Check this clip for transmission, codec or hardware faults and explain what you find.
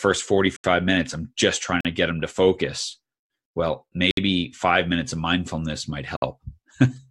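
Four dropouts cut this speech, each a block of digital silence: at 0.56 to 0.64 s (77 ms, just before "minutes i'm just trying"), 1.81 to 1.85 s (43 ms, between "minutes i'm just trying" and "to get them to"), 4.11 to 4.17 s (64 ms) and 6.16 to 6.22 s (57 ms, after "minutes of mindfulness might"). The audio drops abruptly to zero and returns with no fade, so the speech has a brief hole. This points to the output buffer not being filled in time. The 43 ms gap fits a 2048-sample buffer at 48 kHz.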